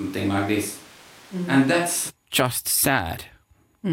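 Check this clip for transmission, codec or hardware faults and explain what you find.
One fault is present. From the start to 2.09 s, the speech is roomy and hollow with thin bass and background noise about 25 dB below it, ending abruptly, likely a switch to a distant microphone.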